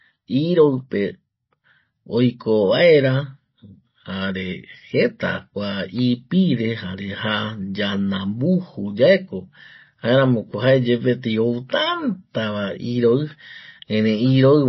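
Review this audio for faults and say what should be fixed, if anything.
The whole clip carries plainly audible MP3 compression damage, likely from a heavily starved encode: nothing survives above 5.8 kHz, so the speech sounds dull, and weak detail flickers in and out, giving a watery, swirly texture that fits a bitrate around 24 kbps. Encode from the original at a much higher bitrate, or keep a lossless master, so the encoder never has to cut the top end.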